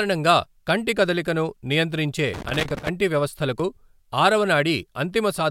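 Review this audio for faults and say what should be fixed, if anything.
An irregular burst of crackle and scratching from 2.34 to 2.89 s is loose connector crackle: a worn or dirty contact intermittently breaking, chopping the speech signal. Clean or replace the connector and secure the cable so it cannot shift during recording.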